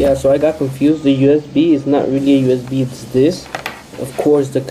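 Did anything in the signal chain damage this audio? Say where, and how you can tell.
Yes. Between 0.88 and 2.17 s one channel runs a couple of samples late at the driver or buffer stage, about 0.05 ms, and a mono sum then creates channel delay (comb filtering). The first cancellation falls around 10 kHz, dulling the top end.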